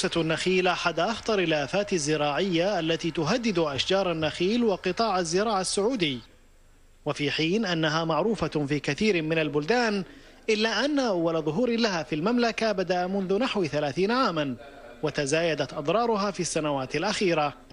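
No technical faults can be heard anywhere in the recording.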